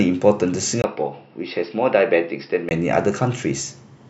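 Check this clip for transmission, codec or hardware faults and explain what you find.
One fault, from 0.82 to 2.71 s: most likely an input switched to a poorer device. The capture jumps to a narrower-band input after a 20 ms gap, so nothing above 5.5 kHz survives, the level drops roughly 5 dB, a faint new noise floor appears, and the speech turns dull and boxy until it clears.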